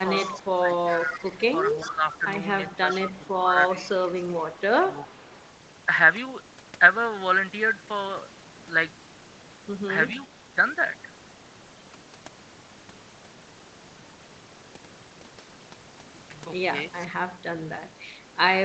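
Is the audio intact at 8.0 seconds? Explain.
Yes, the speech at 8.0 seconds is intact, with nothing beyond the ordinary band limit of the call path, whose content stops at about 8 kHz.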